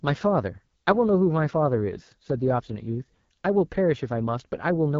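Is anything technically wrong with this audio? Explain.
Yes. Throughout the speech, AMR wideband (HD Voice) coding at a very low rate, which fits about 8.85 kbit/s, models the voice coarsely, so it sounds rough and raspy with nothing above 7.5 kHz.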